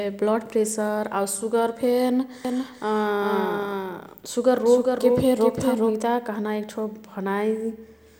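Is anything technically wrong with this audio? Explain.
Yes. From 2.45 to 6.03 s there is a doubled audio track: a second copy of the speech trails roughly 0.4 s behind, around 5 dB quieter, likely captured again by a slower path. Unlike an echo, it is one full-band repeat with no decay or room colour, and it starts and stops abruptly.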